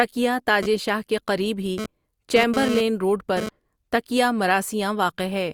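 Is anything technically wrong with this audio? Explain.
Yes. From 0.63 to 3.49 s, a hard, raspy 217 Hz buzz, about 5 dB below the speech, comes and goes. This is GSM phone buzz: the audio circuit rectifies bursts from a nearby 2G phone sending data.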